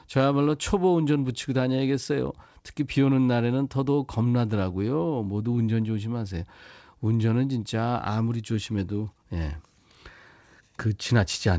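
No technical faults occur anywhere in the speech, so there are none to describe in time order.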